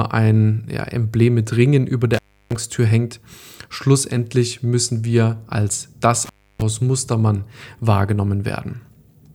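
At 2.14 s the speech drops out until 2.56 s. This is an intermittent contact. A loose cable or plug breaks the signal path for about 0.32 s. Crackle marks the moment it opens and closes. In between, only faint hiss remains. It happens again just after "müssen wir als", from 6.25 to 6.62 s. That gap lasts about 0.30 s, with the same crackling edges and hiss.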